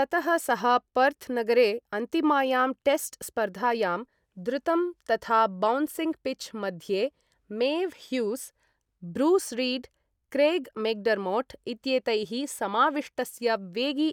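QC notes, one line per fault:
No faults found in this speech.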